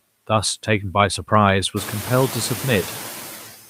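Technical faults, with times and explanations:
Throughout, noise suppressor artifacts: bands judged to be steady noise are pulled down by about 6 dB frame by frame, so the background dips between words and returns beneath them, and the room noise rises about 17 dB near 2 s.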